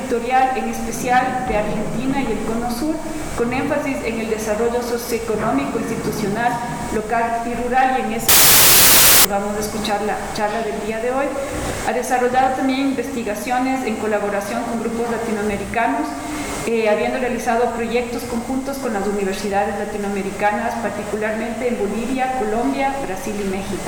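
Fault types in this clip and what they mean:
Samples built from the wrong bytes: from 8.29 to 9.25 s, about a second, the sample bytes are put together wrongly, whether shifted by one byte, reversed in order or misaligned, so the rapidly changing low bits end up carrying most of each value. The result is loud, harsh broadband noise in place of the sound. On a spectrogram the band is bright, broadband energy; the waveform jumps to dense, heavy fuzz.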